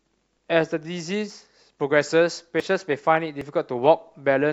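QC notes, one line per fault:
1.30 s, 2.60 s, 3.41 s: dropped buffer (overrun). Each point has a small jump forward in the speech and no gap of silence. About 20 ms of audio is likely missing, overwritten before capture, so the two sides butt together.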